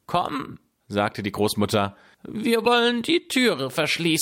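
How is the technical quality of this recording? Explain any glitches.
The speech carries one audible glitch, a brief corrupt frame decoded at 2.65 to 2.67 s. It lasts only a couple of compressed frames. Flipped bits in those frames were decoded anyway, so energy landed at the wrong frequencies. It sounds like a sharp chirpy blip, peaking around -15 dBFS.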